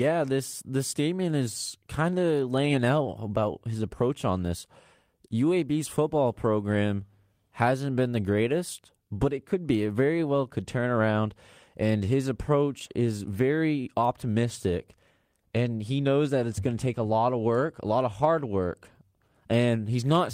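Nothing stood out as a technical fault on listening to this speech recording.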